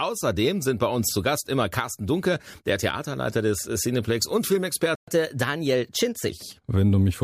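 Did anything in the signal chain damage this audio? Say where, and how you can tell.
Yes, and it's at the playback end. At 4.95 s the speech just stops dead and stays silent until 5.08 s, a gap of about 0.12 s, then picks up again. That's a playback stall: the output went quiet for a noticeable moment in mid-flow. The likely cause is the player running dry on data or its audio thread getting blocked briefly, so nothing was handed to the output until it recovered.

Right after that, from 5.08 s to 6.30 s, the speech runs fast, at 1.1 times normal speed, and the pitch rises by about a semitone and a half. That's catch-up at higher speed: the player resampled its backlog to claw back the time it lost in the stall, so tempo and pitch rise together. At 6.30 s it drops back to normal rate and pitch.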